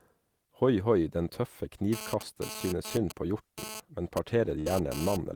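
From 1.93 s to 5.17 s a GSM phone buzz runs under the speech, sitting about 10 dB below it. A nearby 2G handset was transmitting in bursts at 217 Hz, and the audio circuitry rectified those radio pulses into a hard, raspy tone rich in harmonics. Because the phone was moving data rather than holding a call, the buzz comes and goes. That gating and its gritty 217 Hz texture separate it from mains hum, which is a smooth, continuous 50 or 60 Hz drone.

Between 4.59 s and 4.71 s a burst of packet loss interrupts the speech for about 110 ms. The receiver had nothing to play, so it stretched the last received sound for roughly 66 ms while turning it down, which gives a brief held, fading tail. About 60 ms of speech never arrives, and the audio picks up further along. That smeared, decaying fill separates it from a plain dropout, which falls straight to silence and carries no leftover trace of the preceding sound.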